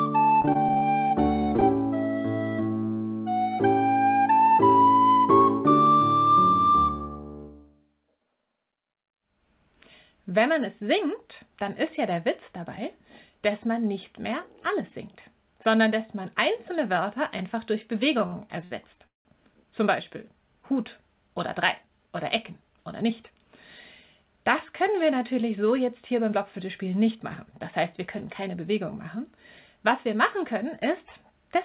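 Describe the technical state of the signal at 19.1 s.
At 19.1 s the signal is inside a burst of repeated stalls (stutter) running from 18.20 to 19.27 s. Packets arrived late, so the jitter buffer emptied four times and the receiver stretched the last sound to fill about 314 ms, with the longest hold near 182 ms. Nothing is lost, but the audio drags and stutters. On a spectrogram, which shows nothing above 4 kHz on this G.711 call path, the filled stretches appear as smeared, repeated bands, and the longer ones fade in the waveform.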